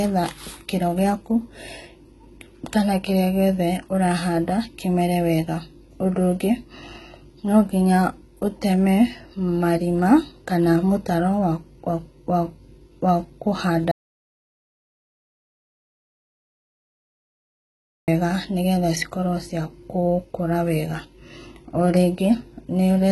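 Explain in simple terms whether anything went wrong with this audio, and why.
The speech was likely squeezed by HE-AAC compression, which rebuilds the treble from lower sounds, so s sounds come out gritty and nothing sits above about 11.8 kHz.

The input likely cut out, causing an audio dropout to silence: from 13.9 to 18.1 s, about four seconds of speech vanish into dead silence.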